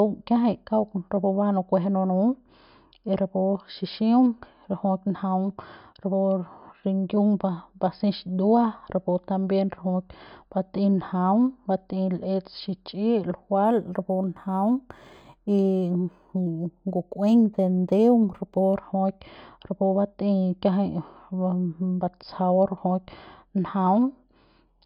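Speech, with imaging from linear upsampling between 13.65 and 18.77 s. The top is dulled, and a faint metallic shimmer on sibilants sits between 5.5 and 11 kHz, roughly 45 dB down. This fits an 11 kHz source raised to 44.1 kHz by straight-line interpolation. Unlike aliasing, the shimmer mirrors the band rather than folding inharmonic tones downward.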